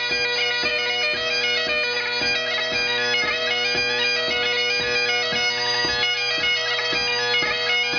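Nothing stood out as a technical fault on listening.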